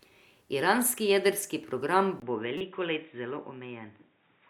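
The recording path for this speech clip appears to drop to a lesser input at 2.2 s, likely an input switched to a poorer device such as another microphone or a headset's call profile. The handover leaves a gap of about 20 ms. From then on nothing reaches above 3.8 kHz, so the speech turns dull and boxy. A faint new background noise sits well below the speech, with no obvious jump in loudness at the change. Shortly afterwards, from 2.58 to 2.61 s, damaged compressed data reaches the decoder and gets played out as a corrupt frame decoded. Roughly two frames are affected. Their scrambled gains and codes scatter energy into the wrong frequencies, producing a brief glitch that peaks at about -20 dBFS before the sound continues through the narrower device.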